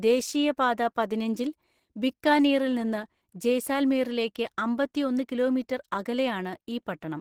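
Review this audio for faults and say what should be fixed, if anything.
Opus compression damage runs through the whole recording and is plainly audible. The speech sounds hoarse and muffled, with a rough, grainy texture in place of clean harmonics, while the top end is still present rather than cut off. The likely cause is a low-rate Opus encode in its mixed speech-and-music mode, where too few bits leave the upper bands filled with approximate noise; the damage fits a rate around 16 kbps. To prevent it, encode the original at a higher Opus bitrate, or keep a lossless master and compress only once.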